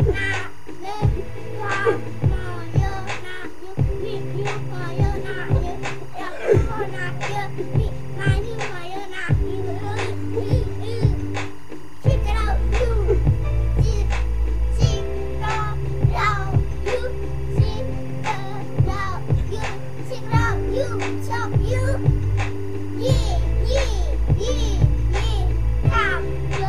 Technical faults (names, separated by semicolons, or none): timecode bleed